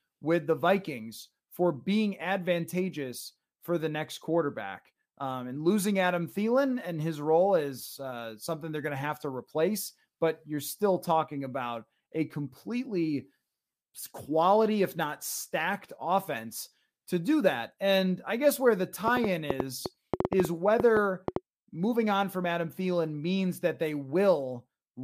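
Likely interference from nearby equipment, or a faulty connection or power supply, injects a train of clicks from 19.08 to 21.37 s, between "I guess where the" and "moving on from". Around fifteen near-identical pulses arrive at about 6.6 per second, unevenly spaced, each standing some 15 dB above the speech. The result is an irregular ticking and popping laid over the voice that carries on through the gaps as well.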